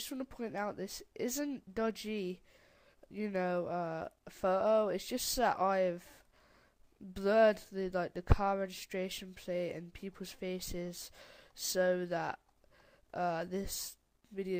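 No technical faults can be heard anywhere in the recording; the signal holds steady throughout.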